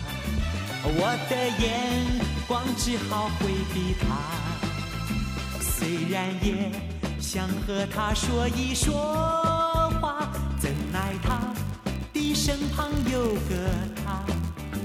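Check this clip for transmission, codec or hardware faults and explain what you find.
One fault appears, a block size mismatch (padded), from 10.57 s to the end at 14.85 s. One stage hands over blocks slightly shorter than the next stage expects, and the shortfall is filled with zeros. Those tiny repeated gaps produce a buzz at about 91.5 Hz, and playback runs at 0.996 times normal speed.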